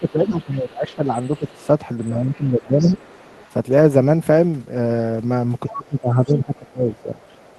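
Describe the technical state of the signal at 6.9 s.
At 6.9 s two faults overlap. The first is the other side's voice leaking through, present from 5.68 s to the end of the clip. A second voice is faintly audible underneath the talker, roughly 30 dB below them. The likely cause is a loudspeaker on the talker's device feeding the far end back into the microphone, with the echo canceller failing to subtract all of it before transmission.

The second fault is speech suppressed in double talk, running from 5.74 s to 7.22 s, so 6.9 s falls near the end of that span. The talker's level sinks unevenly across about one and a half seconds, at its deepest around 20 dB down. This is likely the echo canceller reacting to both sides talking at once. It could not separate the near talker from the loudspeaker echo, so it attenuated everything.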